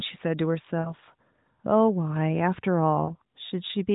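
At 0.80 to 0.93 s the speech drags out and fades briefly, and at 3.06 to 3.10 s there is a shorter dip. These are lost AMR speech frames in the narrowband call audio, about 40 ms and 20 ms of missing data. The decoder filled each gap by repeating the last good settings at falling level.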